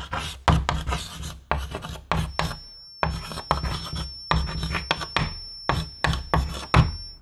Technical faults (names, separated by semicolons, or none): feedback whistle